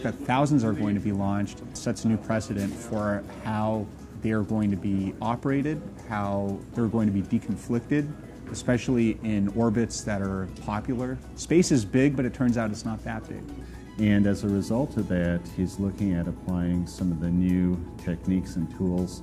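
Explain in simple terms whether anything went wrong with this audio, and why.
From 8.69 s to the end, a steady low buzz at 60 Hz sits under the sound. This is mains hum: electricity from the power line leaking into the signal, typically through a ground loop or a nearby transformer.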